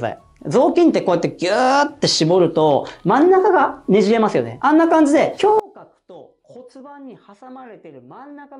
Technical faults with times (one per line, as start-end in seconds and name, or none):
5.59-8.59 one channel inverted